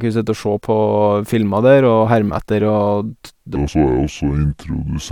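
At 3.56 s, just after "og t det", the speech drops into a section at the wrong speed that runs to the end at 5.11 s. Playback runs at 0.668 times the original rate, so pitch and tempo fall together by roughly seven semitones and the voice turns deep and dragging. This is likely the section being fitted to the wrong clock. On a spectrogram, the harmonics and formants shift downward and stretch horizontally from that point on.

At 3.67 s, inside the slowed section, compressed frames are skipped. About two frames go missing, which fits a frame length of 23.2 ms and removes roughly 50 ms of audio. The sound jumps forward by the length of the missing frames. The waveform shows a discontinuity, and the spectrogram shows a thin vertical seam where the harmonic tracks stop matching.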